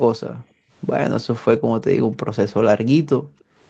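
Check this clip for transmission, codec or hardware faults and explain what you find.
Three kinds of fault turn up: two stretches of gated background, one short patch rebuilt from error correction, and a faint echo near the end.

Background gated by the echo canceller, 0.40–0.71 s and 3.18–3.60 s: the canceller clamped the microphone while the far loudspeaker played, so room sound drops by about 29 dB, then about 40 dB.

Lost packet rebuilt from error correction, 1.51–1.57 s: about 40 ms, fitting two lost packets, plays from the low-bitrate Opus backup copies, so it sounds briefly rougher and noisier with no gap.

Echo leak, 3.39–3.44 s: a faint copy of the speech trails 292 ms behind at about 40 dB down, likely loudspeaker sound the echo canceller failed to remove fully.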